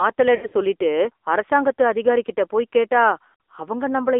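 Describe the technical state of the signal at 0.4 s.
Lost AMR speech frames span 0.36 to 0.54 s, just before "சொல்லிட்டு அரசாங்கத்து அதிகாரிகிட்ட போய்". Corrupted frames were replaced by the decoder's repeat of the last good pitch and vocal tract settings at falling gain. The gaps are scattered over 160 ms, with the longest run lasting 60 ms, which fits roughly five dropped 20 ms frames. The speech warbles and dips there.

Underneath, the AMR narrowband mobile codec is plainly audible. The line band runs from 300 Hz to 3.6 kHz, and the buzzy, synthetic pulse-driven vocal tract model fits a low mode of about 7.4 kbps.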